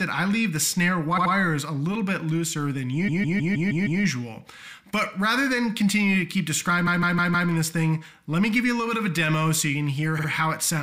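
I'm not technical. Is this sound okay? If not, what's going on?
No. This audio has repeated frames: small chunks of the compressed file were stored more than once, so they play again. At 1.17 to 1.32 s and 10.18 to 10.28 s, brief chunks repeat twice; at 3.07 to 4.01 s and 6.86 to 7.49 s, a 157 ms chunk loops several times, causing a stutter.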